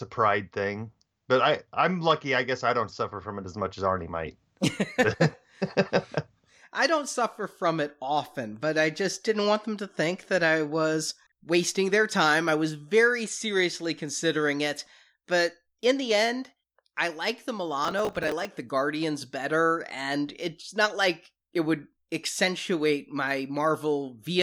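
A gritty, tearing crackle rides over the speech from 17.85 to 18.45 s, just after "end I like the", then stops cleanly. This is processor overload crackle: the processor fell behind on its small audio buffers, each around 5 ms, and missed about twenty deadlines over that stretch. Each miss replayed a stale scrap of old audio with hard edges, and those rapid splices blend into the rough, granular burst.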